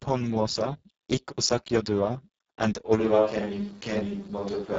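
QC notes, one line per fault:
Throughout: Speex codec, heavy damage. Speech sounds hoarse and buzzy, with noise-like hiss standing in for highs. Nothing above 7.8 kHz, which fits a very low bitrate near 5.8 kbps.
2.99 s to end: Switch to a distant microphone, likely. The sound abruptly turns roomy and hollow with thinner bass, about the same level, and background noise roughly 25 dB under the speech.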